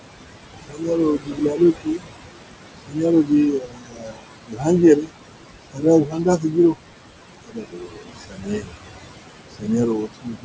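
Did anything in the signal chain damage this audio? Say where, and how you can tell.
Yes. Noise suppressor artifacts run through the whole clip, from the call processing stage. The room noise, about 10 dB under the speech, sinks by about 21 dB in the gaps and swells back beneath each phrase. The suppressor sets per-band gains frame by frame.

Speech cut by the noise suppressor occurs at 0.68–2.05 s, 2.86–4.67 s, 5.02–5.12 s, 5.72–6.76 s, 7.44–8.85 s and from 9.52 s to the end. Quieter stretches drop by about 20 to 22 dB and sound swallowed, because the suppressor classed them as noise and pulled them down with it.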